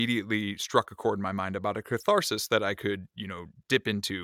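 Nothing stood out as a technical fault on listening to the speech in this clip.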